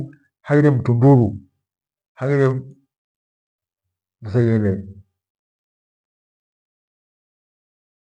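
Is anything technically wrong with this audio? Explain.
No, nothing stood out on listening, and the smooth fade out at the end of this speech clip comes in gently without any click or hard edge.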